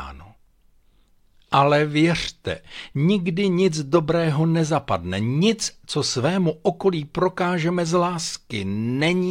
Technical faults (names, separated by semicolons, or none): resampler restarted on every block